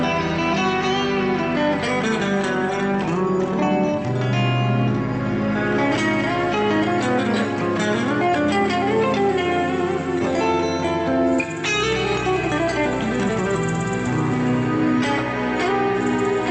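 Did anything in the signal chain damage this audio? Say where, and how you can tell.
No, nothing in the chain has damaged this audio. It has clearly passed through a call path: the top end stops at about 8 kHz, consistent with Opus at a moderate bitrate, and the coding is working as it should.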